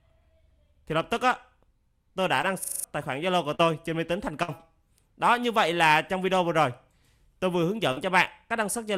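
The audio has three kinds of fault. Short concealed packet loss appears three times: at 2.41 to 2.45 s, where about 20 ms went missing and 14 ms was filled; at 3.55 to 3.61 s, with 40 ms missing and 40 ms filled; and at 7.92 to 7.98 s, with 40 ms missing and 43 ms filled. Each time, audio arrived too late for the decoder, so the receiver extended the preceding sound and then blended back into the real signal. The result is a brief smear or wobble, and a short sound inside the gap can disappear. These fills are short and blend back, with no fading hold.

That fading hold is what marks the burst of packet loss at 4.43 to 4.50 s. About 60 ms of audio is missing, bridged by a 52 ms fill. As the gap continues, the extended sound is turned down, and then the audio resumes further on, with the section in between missing.

The system hang loop at 2.64 to 2.84 s is a different mechanism. The system or driver stalled while the sound hardware kept cycling through the same 40 ms of its buffer. 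That piece repeats exactly five times, at a rate of 25 per second, and replaces roughly 200 ms of audio. The repetition is exact rather than a synthesized continuation, so it is heard as a looped repetition instead of a smear or a fade.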